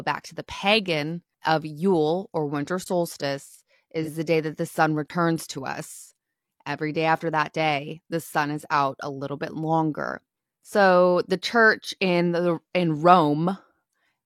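A speech recording with two kinds of fault. Twice the output buffer was likely not filled in time, producing a block of digital silence: a 20 ms gap, at 2.84–2.86 s just after "or winter" and at 5.08–5.10 s between "day that the sun" and "to us". AAC frame loss with concealment, where the decoder patched in a single lost frame of about 43 ms, leaves a brief smeared, phasey patch at 4.02–4.08 s just before "the day that the" and again at 11.84–11.88 s.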